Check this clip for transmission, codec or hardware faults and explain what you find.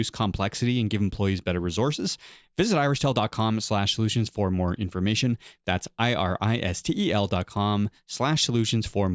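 Nothing wrong can be heard anywhere in this recording.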